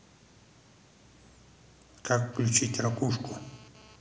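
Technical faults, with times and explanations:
2.33–3.96 s, GSM phone buzz: a raspy 217 Hz buzz about 26 dB below the speech, from a nearby phone's data bursts being rectified; spectrogram shows evenly spaced harmonic lines.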